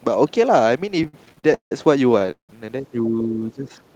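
From 1.03 to 1.72 s you get repeated stalls, a stutter: the jitter buffer keeps running dry because packets show up late, so the receiver stretches out the last bit of sound to cover the holes. There are nine of those hiccups, about 316 ms filled in all, the longest around 168 ms. Nothing actually goes missing, but the speech drags and catches. It happens again from 2.12 to 2.50 s, five gaps totalling 227 ms, one running to about 177 ms, so over half that stretch is patched-over sound.

Then from 2.81 to 3.69 s the speech sinks, dropping by about 10 dB at its worst and affected for roughly 0.7 s of that window. That's speech suppressed in double talk, likely because the far end was talking at the same time and the echo canceller couldn't tell this talker apart from its own loudspeaker echo, so it pulled everything down and the voice comes through ducked.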